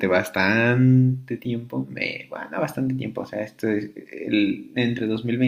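No technical faults are audible.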